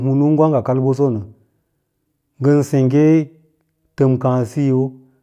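No technical faults can be heard anywhere in the recording.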